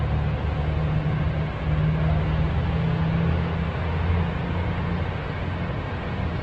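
Throughout, the sounds are rough and grainy, with nothing above 8.1 kHz. The likely cause is heavy Opus compression, fitting about 12 kbps, with starved bands filled by noise.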